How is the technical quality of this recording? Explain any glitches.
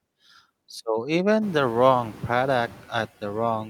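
The recording carries one processing fault, present throughout the speech.

Noise suppressor artifacts, from start to finish: a suppressor is estimating the steady background noise in each frequency band and pulling those bands down frame by frame, by about 13 dB here. Because it relaxes whenever speech is present, the noise floor dips in the gaps between words and comes back up underneath them. The result is a pumping background. This is most noticeable after around one and a half seconds, when the room noise jumps by about 18 dB and then sits roughly 19 dB under the speech.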